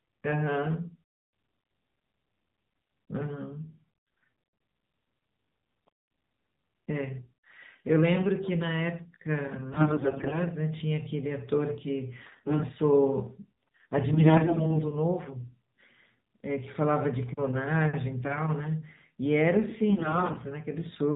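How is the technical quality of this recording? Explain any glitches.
The recording is narrowband phone-quality speech with four short stretches of corruption.

Throughout, the speech sounds boxy, buzzy and synthetic, with nothing above 4 kHz. That is the AMR narrowband mobile codec: 8 kHz sampling and a pulse-driven vocal-tract model, and the plainly audible damage fits a low mode of around 7.4 kbps.

AMR bit errors turn the speech hoarse, scratchy and gargly while pitch and loudness roughly hold, at 9.72–10.41 s, 12.24–12.64 s, 14.14–14.83 s and 19.90–20.47 s. Flipped low-priority bits misplace the excitation pulses and skew gain and spectrum. The damage is heavier in the first and third stretches.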